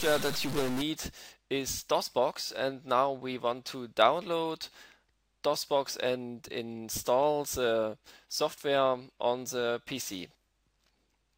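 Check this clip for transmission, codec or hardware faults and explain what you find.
One fault is present. From 0.0 to 0.82 s the sound carries harsh, buzzy distortion with noise filling the quiet moments, likely a stuck bit adding a fixed error of about -30 dBFS to roughly half the samples.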